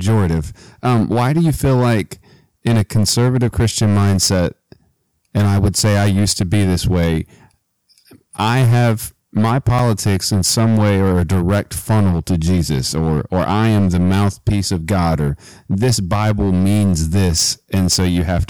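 It's a speech clip with hard clipping all the way through: the signal is pushed about 10 dB past what the chain can pass, so roughly a tenth of the samples get sliced flat. Those squared-off peaks throw harmonics way up top, giving a harsh fuzz on every loud syllable. Then at 9.79 s there's a block of digital silence, a 6.8 ms run of zeros, most likely because the output buffer wasn't filled in time. The abrupt cut and return give a sharp tick.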